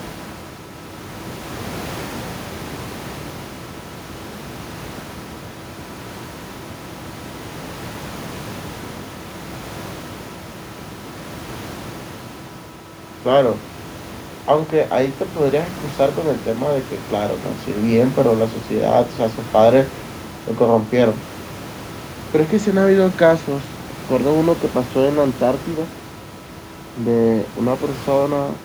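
Nothing goes wrong anywhere in the speech, and the only thing underneath it is a bit of ordinary room noise sitting about 18 dB below the talking, which belongs to the recording itself rather than to anything in the chain.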